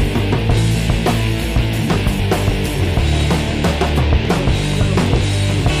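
At 0.56 s and again at 2.18 s, compressed frames are skipped: the decoder never plays a short run of frames, so the sound jumps ahead by roughly a tenth of a second each time, a handful of the 23.2 ms frames. What separates this from a dropout or a sample-level glitch is that no gap or silence appears; the audio simply resumes further on.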